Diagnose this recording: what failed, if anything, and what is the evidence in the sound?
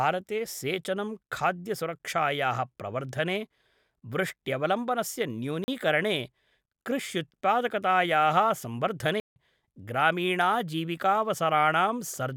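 Block of digital silence at 5.64–5.68 s and 9.20–9.36 s: the speech cuts to silence for 40 ms, then 160 ms, with no fade. This points to the driver or buffer stage, which missed its deadline and output zeros.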